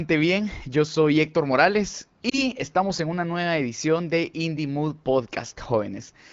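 Around 2.29 to 2.43 s there's a lost AMR speech frame, just one 20 ms frame that failed its check. The wideband decoder papered over it by repeating the previous pitch and vocal tract settings at lower gain, so you hear a short dip or warble in the speech.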